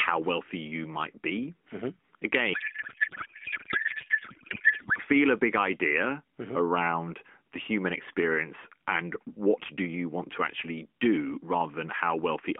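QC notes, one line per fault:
2.54 to 4.99 s, codec payload misread: the speech gives way to garbled noise and warble that barely tracks it. It clears just before "feel a big idea". The decoder is reading well-formed AMR frames but with the bit fields shifted. That fits octet-aligned packing being unpacked as bandwidth-efficient. Around it, the AMR narrowband line sounds lightly coded, with nothing above 3.5 kHz.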